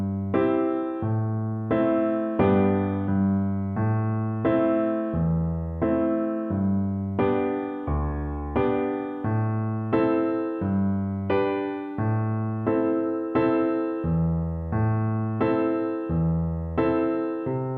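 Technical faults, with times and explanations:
No technical faults are audible anywhere in the recording.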